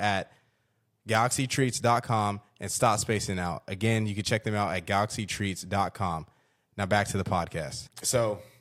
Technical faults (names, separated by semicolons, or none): none